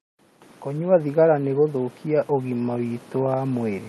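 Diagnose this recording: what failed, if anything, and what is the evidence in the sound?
Call processing: an automatic gain rise runs from 0.05 s to the end at 3.89 s. The gain control judged the input too quiet and kept raising it, so speech and background noise swell together. A talker moving closer would raise the voice alone.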